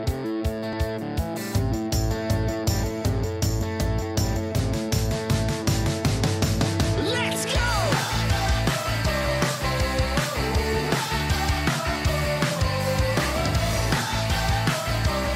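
No technical faults can be heard anywhere in this audio. There is nothing to place on a timeline or trace back to a cause.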